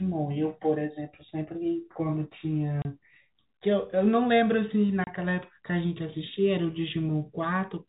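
Two abrupt 30 ms holes, at 2.82 s and 5.04 s, cut into the speech with hard edges: packet loss filled with silence, each gap consistent with one dropped 30 ms packet.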